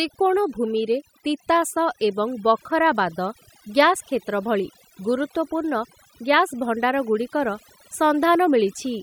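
Throughout the speech, the background drops and breaks up into twinkling specks: overdone noise removal cutting bands near the noise estimate.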